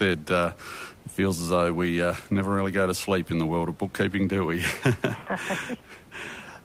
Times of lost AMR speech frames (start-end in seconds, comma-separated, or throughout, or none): none